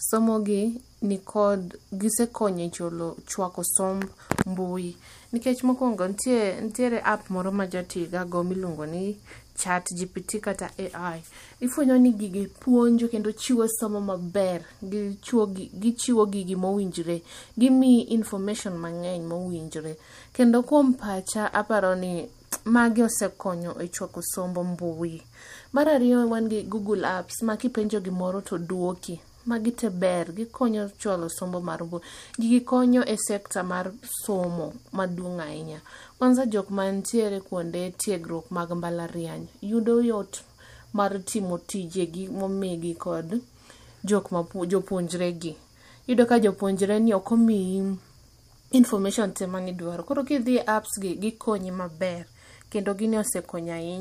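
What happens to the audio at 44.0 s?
Nothing goes wrong at 44.0 s; the speech carries straight through that moment with no audible fault.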